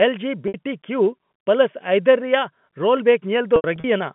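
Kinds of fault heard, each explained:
Packet loss with pitch repetition: audio went missing and the receiver patched each gap by looping the last pitch cycle. The 60 ms hole near 0.48 s comes out as a short buzzy hold, while the scattered losses between 3.56 and 3.84 s, up to 80 ms long, fade toward silence before cross-fading back.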